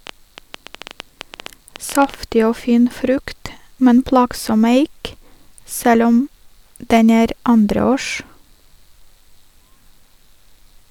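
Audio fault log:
0.07–2.15 s, train of clicks: right at the start there's a burst of ticking, close to ten clicks a second but at an uneven pace, some twenty of them, all much the same sharp shape and poking out around 10 dB above the speech. They sit on top of the sound rather than replacing it and stop just before "og fin frukt men". That steady stream of near-identical pulses is most likely interference from nearby gear or a faulty connection or power supply.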